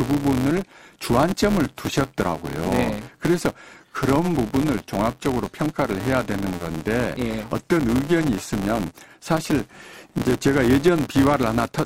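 From start to finish the speech carries a buzz at 172 Hz, the signature of a filter restarted on every block. The filter drops its internal state at each block boundary and starts again from silence, so every block opens with a small transient. Those transients repeat about every 5.8 ms, which fits a 256-sample block, and the resulting buzz rises and falls with the level of the speech.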